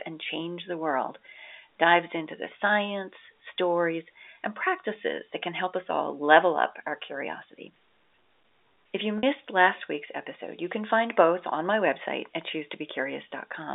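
Packet loss with pitch repetition at 9.18 to 9.23 s, just before "last week's episode you": 50 ms of audio dropped out, fitting five 10 ms packets, and the receiver bridged it by looping the last pitch period, so the sound briefly holds with a buzzy edge.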